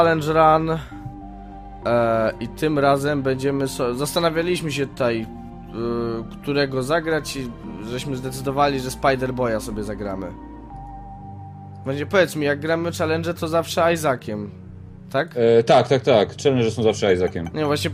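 No technical faults can be heard anywhere in the recording. Nothing in the audio calls for comment on the signal path.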